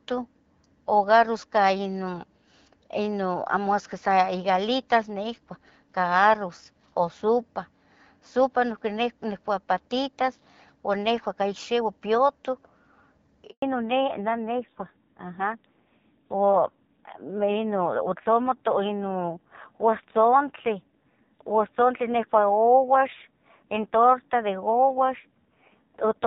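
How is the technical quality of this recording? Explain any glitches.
The recording has two related call-network faults partway through, and the second lasts to the end. Before them, the speech carries the light coding texture consistent with AMR-WB HD Voice at around 12.65 kbit/s.

Handover gap, 13.50 to 13.62 s: the sound cuts out for 120 ms. During a handover from one network to another, no speech frames arrived, so the audio fades within a few tens of milliseconds and stays silent until the new link starts. Whatever was said in that window is lost.

Fallback to narrowband, from 13.62 s to the end: the call drops from wideband to an older narrowband codec, and nothing above 4 kHz remains. The speech turns duller and rougher. The added coarseness suggests a low narrowband rate, roughly 5.9 kbit/s.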